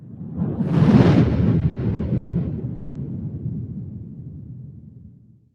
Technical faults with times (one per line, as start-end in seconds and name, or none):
0.00-5.55 noise suppressor applied to music or sounds
1.59-2.35 repeated stalls (stutter)
2.75-2.97 call audio freeze